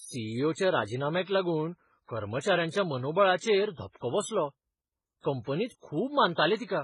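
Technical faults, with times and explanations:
Throughout, transcoding between lossy codecs: speech likely passed through low-rate MP3 then HE-AAC, stacking both codecs' artefacts, with nothing audible above 11.2 kHz.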